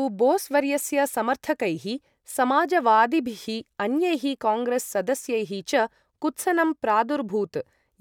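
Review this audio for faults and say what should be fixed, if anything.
Nothing to fix: no audible faults anywhere in the speech recording.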